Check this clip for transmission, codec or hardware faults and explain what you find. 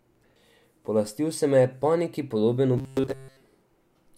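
One fault stands out: robotic sound from repeated short buffers, from 2.78 to 3.42 s. The speech there turns into a hard, metallic buzz pitched at 133 Hz. The rough shape of the speech still comes through. The likely cause is audio arriving too slowly, so the playback keeps looping a tiny slice instead of waiting. A 133 Hz buzz fits a slice of about 7.5 ms. Most of the sound in that stretch is repeats, not new audio.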